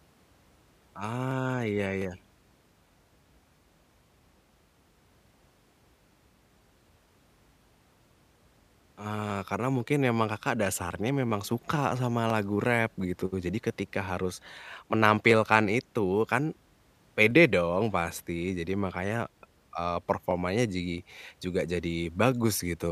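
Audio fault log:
0.32–22.32 s, periodic USB or driver dropouts: once every 1.0 s, something on the system stalls the USB bus or audio driver, and a sliver of the speech stream, roughly half a millisecond, is skipped outright, so the waveform on either side is spliced together with a sudden jump. Each jump is heard as a small, sharp tick, and about twenty of them fall at a steady one-second rhythm, audible only where the speech carries signal.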